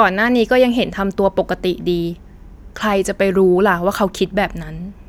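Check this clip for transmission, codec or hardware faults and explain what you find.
No faults turn up in this clip, so there is nothing to explain.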